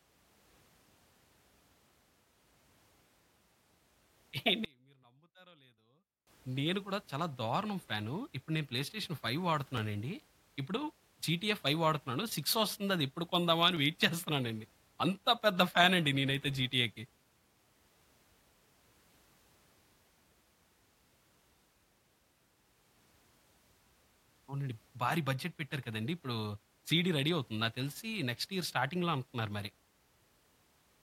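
From 4.65 to 6.27 s the speech collapses by about 30 dB and turns faint. This is most likely one channel inverted: with one side's polarity reversed, the material common to both channels cancels when summed to mono, leaving only their faint difference. Unlike a dropout or mute, the sound never goes fully silent, and it returns at full level once both channels are back in phase.

At 9.77 s and again at 13.77 s there is a tiny skip, a few milliseconds lost, with the audio on either side butted together and no silence between. The two skips fall exactly 4.0 s apart, which points to the likely cause: audio missing between chunks, as a recorder or processor working in 4-second blocks drops a sliver at each handover. That strict regularity and the absence of any gap set it apart from random network packet loss.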